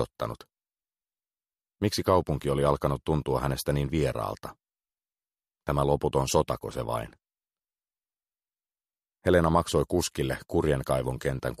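No technical fault can be heard anywhere in this audio. It holds steady throughout, with nothing that calls for a time or a cause.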